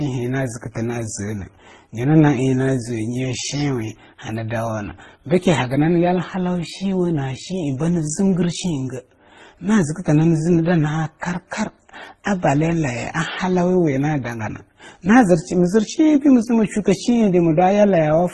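From start to finish the speech carries the mixed artefacts of transcoding between lossy codecs, likely MP3 at a low bitrate re-encoded to Opus. Swirly, smeared detail sits over a dull top, and a spectrogram shows nothing above 12 kHz, with patchy, blocky high bands.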